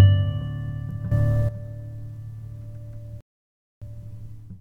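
A sudden gain jump at 1.12 s lifts the sound and its background noise together by about 13 dB in one step, likely from a gain setting applied without a ramp, until 1.49 s. A rebuffering stall at 3.21 s cuts to silence for about 0.61 s as playback waits for data, then resumes exactly where it stopped at 3.82 s.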